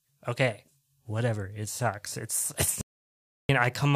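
Speech runs until 2.81 s, when it cuts off abruptly into dead silence, with not even room tone underneath, before resuming mid-flow at 3.49 s. That is an audio dropout to silence lasting about 0.68 s, and whatever was said in that stretch is simply missing. The likely cause is a momentary loss of the input signal, such as a disconnected device, a failed link or an accidental mute, while the recorder kept writing silence.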